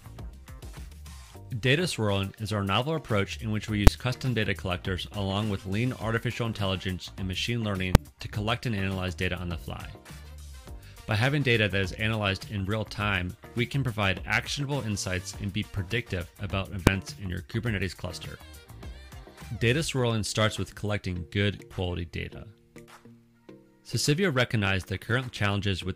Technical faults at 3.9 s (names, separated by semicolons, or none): invalid numbers at full scale